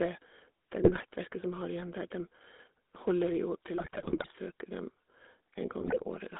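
A speech recording carried over the GSM full-rate codec, whose pulse-excited vocal-tract model works at a rate consistent with 13 kbps and a line band of roughly 250 Hz to 3.6 kHz. Discarding most excitation detail leaves the whole clip plainly buzzy and gravelly, with no highs. GSM bit errors also struck the decoder's filter, pitch and gain values, as on a weak link, at 0.82–1.03 s, 3.76–4.37 s and 5.80–6.04 s. Each burst corrupts frames so the sound squawks, pops and gargles, the middle burst being longest.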